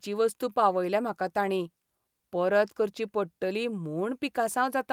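No technical faults are audible.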